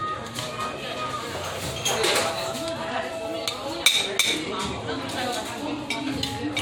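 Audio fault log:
No faults can be heard anywhere in these sounds.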